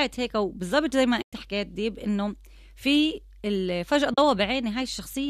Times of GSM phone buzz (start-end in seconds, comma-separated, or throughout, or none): none